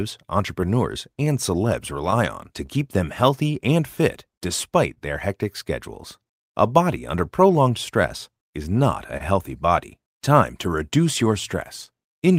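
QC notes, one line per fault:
Throughout: clock drift between sender and receiver. The sending clock runs roughly 2% slow against the receiver's, so the jitter buffer keeps draining instead of holding a steady level. Rather than a single glitch, the speech carries a low-level unevenness from start to finish, with small timing hiccups at irregular spacing. That persistent, one-directional pressure separates it from random network jitter, which would push the buffer both ways and leave no consistent trend.
0.26 to 12.32 s: repeated timing corrections. To keep pace with the slower sender, the receiver keeps repeating tiny slices of audio, running the stream at about 99% speed and adding somewhere around 150 ms in total across the stretch. Every edit goes the same way, lengthening, and the edits are unevenly spaced, each one small. No single moment is held long enough to sound like a stall.
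4.94 to 4.98 s and 9.17 to 9.22 s: short stall from a late packet. In each case a packet missed its slot, the buffer ran dry, and the receiver stretched the last sound for 25 ms and then 29 ms until the data arrived. Playback resumes from exactly where it stopped, with nothing lost, and the delay grows by the length of each fill. These are distinct held moments with a slight buzz or dip, unlike the diffuse, clip-wide hiccups of the corrections.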